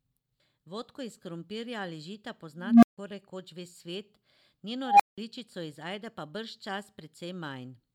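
A speech clip with an unstable filter fault. At 2.58 to 2.98 s a tone near 200 Hz swells over 251 ms, clips, then drops to 150 ms of silence. At 4.83 to 5.18 s a tone near 700 Hz builds over 166 ms, followed by 180 ms of silence. In both events a recursive filter's feedback runs away until the output overflows and the filter resets.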